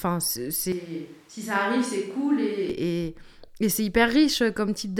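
The close microphone's feed likely dropped out from 0.72 s to 2.70 s, forcing a switch to a distant microphone. The speech turns suddenly roomy and hollow, thinner in the bass and about 10 dB quieter, with faint room noise, before snapping back.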